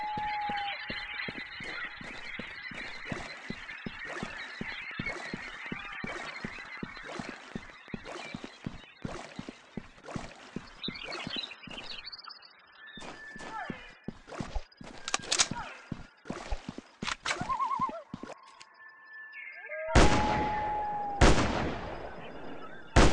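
From 4.72 to 9.22 s a regular train of clicks ticks over the sound at about 5.35 per second, roughly thirty in all, peaking a few dB above the audio. Likely cause: interference or a faulty connection or power supply. A spectrogram shows evenly spaced thin vertical broadband lines, and a waveform shows matching sharp spikes.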